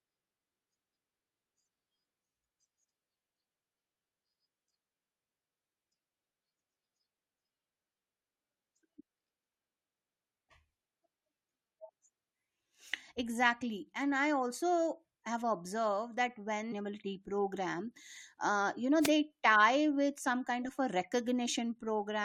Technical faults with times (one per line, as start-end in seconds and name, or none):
18.99-19.11 wireless microphone noise hit